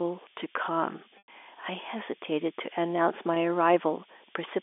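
Throughout the speech, low bit depth with noise shaping leaves a steady, thin hiss rising toward the top of the telephone band, nearly as loud as the voice, which fits roughly 5-bit quantisation.

At 1.18 to 1.28 s, packet loss with pitch repetition bridges a 100 ms gap by repeating the last pitch period, fading toward silence before speech returns through a brief cross-fade. At 3.34 to 3.36 s, a 20 ms loss is patched the same way and sounds like a slightly held, buzzy note. The G.711 line band of 300 Hz to 3.5 kHz is audible beneath both faults.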